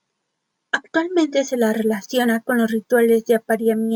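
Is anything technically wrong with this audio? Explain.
Yes. From 1.48 s to the end, the speech has imaging from sample-and-hold upsampling. Going from 22 kHz to 44.1 kHz by repeating samples unfiltered mirrors the spectrum into 11.03–22.05 kHz, at about 28 dB below the signal, as a metallic fizz tracking the voice.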